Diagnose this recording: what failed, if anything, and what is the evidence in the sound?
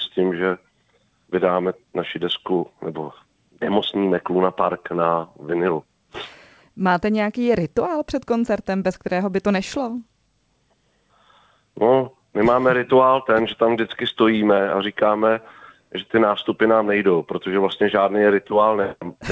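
Nothing failed in this recording.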